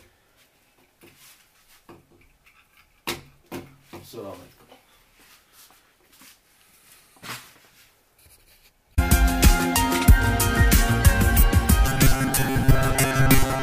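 Robotic sound from repeated short buffers runs from 11.86 s to the end of the clip at 13.62 s. The sound collapses into a stiff, metallic buzz pitched at 134 Hz, still loosely tracking the shape of the audio underneath. This is likely a playback or receive path starved of new data, re-playing a snippet of roughly 7.5 ms over and over, so around two-thirds or more of the real audio is skipped and replaced by repeats.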